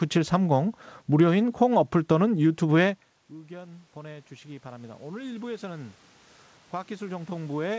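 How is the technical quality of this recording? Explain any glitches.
The main glitch is automatic gain rising. From 3.29 to 6.04 s, the gain control pushes its level up by about 10 dB after the talker moves away from the microphone around 3 s, which drops the input by about 23 dB. Voice and room noise swell together as the gain climbs. The audio carries the coding noise of a wideband call codec, with nothing above 8 kHz.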